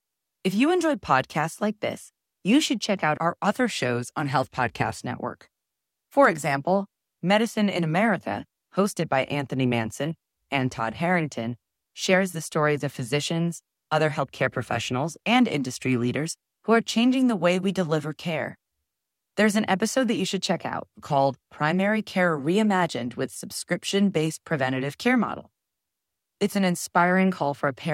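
No technical faults can be heard at any point in time.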